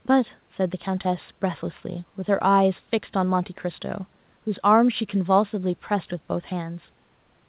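Nothing in this speech recording stood out as a problem on listening.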